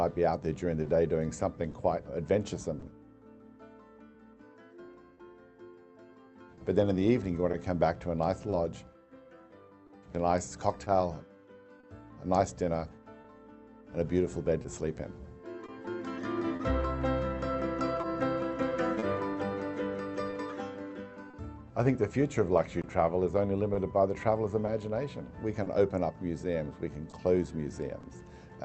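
Clock drift between sender and receiver runs throughout. The sender's clock seems about 2% slow, so the jitter buffer drains and brief timing hiccups recur unevenly. From 0.83 to 28.05 s come scattered short gaps, around thirty of them, none longer than about 30 ms. Each is patched by stretching the last sound, leaving small ticks and smears. The top end stops near 8 kHz, which fits Opus at 32 kbps.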